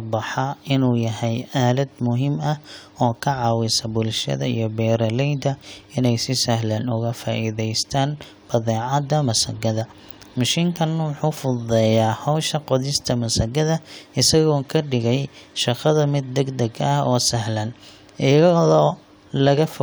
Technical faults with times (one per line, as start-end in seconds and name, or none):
none